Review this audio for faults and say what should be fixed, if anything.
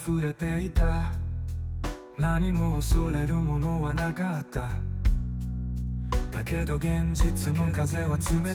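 From 6.12 s to the end, the sound is doubled: a second full-band copy trails the original by about a second, a few decibels quieter, with no reverb or tonal change, and it cuts in abruptly rather than fading up. This doubled audio track is likely caused by the same signal being mixed in twice, either captured again through a slower route or left as two misaligned copies in an edit. To prevent it, make sure each source reaches the mix through only one path, and check edits for stray duplicate regions.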